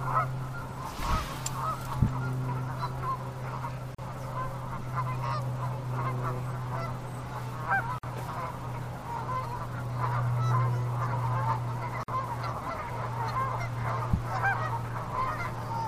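Three short holes of silence cut through otherwise continuous sound, landing every 4 s: at 3.95 to 3.98 s (about 38 ms), 7.98 to 8.03 s and 12.03 to 12.08 s (49 ms each). That's a gap at a join of encoded pieces. The audio was likely encoded in 4-second chunks and butted together untrimmed, so each chunk's encoder start-up delay and end padding stay in as a slightly smeared dropout before the sound picks up where it stopped.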